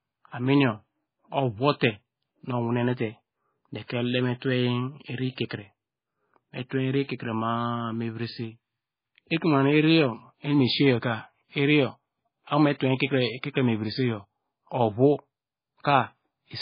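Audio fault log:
Throughout: MP3 compression, likely at a starved bitrate near 16 kbps, so the speech sounds watery and swirly with nothing above 5 kHz and smeared consonants.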